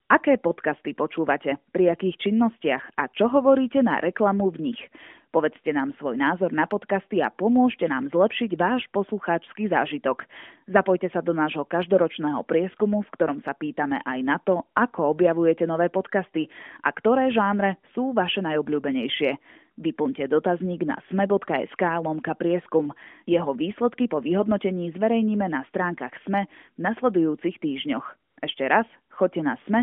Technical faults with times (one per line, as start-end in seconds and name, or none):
0.06-0.10 AMR comfort noise
28.30-28.42 AMR comfort noise